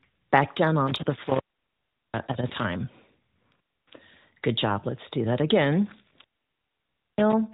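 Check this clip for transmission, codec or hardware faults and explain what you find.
Two faults turn up: an intermittent contact that opens twice, and one lost AMR speech frame. The AMR narrowband mobile codec carrying the audio shows light coding damage and nothing above 4 kHz, as expected for a narrowband link.

Intermittent contact, from 0.87 to 2.65 s and from 6.04 to 7.33 s: a loose plug or cable breaks the connection, for about 0.74 s in the first episode and about 0.94 s in the second. The speech drops out and breaks up, with crackle at the edges and hiss while the line is open. The waveform collapses to a low noise floor with sharp spikes at the breaks, and the spectrogram shows vertical broadband streaks framing a pale gap.

Lost AMR speech frames, at 2.48 to 2.52 s, inside the first contact episode: a radio error made a frame fail its checksum. The 20 ms loss fits a single frame. 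The decoder reused the previous pitch and vocal tract settings at reduced gain, giving a brief dip or warble. The waveform shows a short envelope sag, and the spectrogram shows a smeared, repeated harmonic slice.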